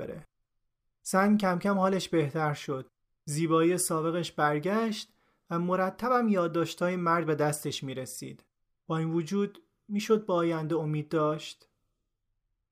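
No technical faults can be heard anywhere in the speech; the signal stays steady and continuous throughout.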